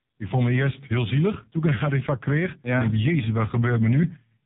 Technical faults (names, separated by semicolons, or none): AMR narrowband mobile codec